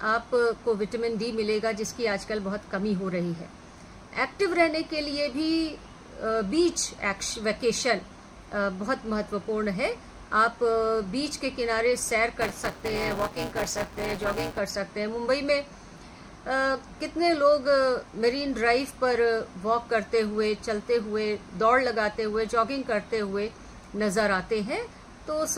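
From 12.41 to 14.59 s there's buffer tearing: the writer and the hardware read pointer have drifted and cross mid-period, so about a fifth of each buffer replays audio roughly 10 ms stale. You get a steady robotic buzz at 172 Hz, which fits a 256-sample buffer.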